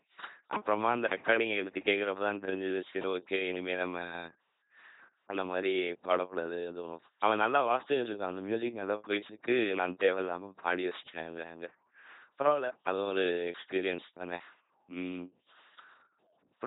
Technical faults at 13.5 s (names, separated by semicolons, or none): LPC-10 vocoder